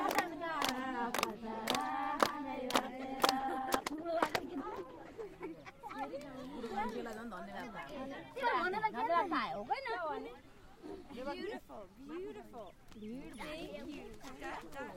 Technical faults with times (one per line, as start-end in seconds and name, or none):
3.40-5.33 call bitrate drop